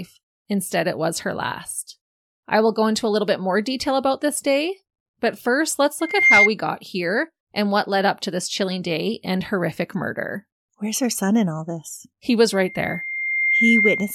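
A piercing 2.1 kHz tone swells within a fraction of a second at 6.00 s to 6.50 s, then rises more slowly from 12.52 s to the end. This is loudspeaker feedback squeal: the microphone picks up its own loudspeaker until that frequency runs away.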